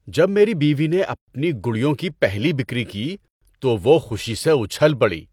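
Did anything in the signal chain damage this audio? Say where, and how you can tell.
Yes. A gap at a join of encoded pieces (codec stage) opens silences at 1.16 s (122 ms) and 3.28 s (136 ms). Untrimmed encoder delay and padding leave the silence. Speech resumes where it stopped, so nothing is lost as in a network dropout.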